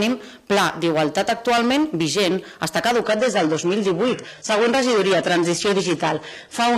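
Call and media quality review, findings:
Adaptive stream at a lower bitrate, 3.02 s to end: sudden loss of top end, nothing above 11.8 kHz, synthetic-sounding treble, more codec artefacts. Player/ABR logic switched to a lower rung, consistent with AAC-LC 96 kbit/s dropping to HE-AAC 16 kbit/s. No gap, unlike a dropout or rebuffer.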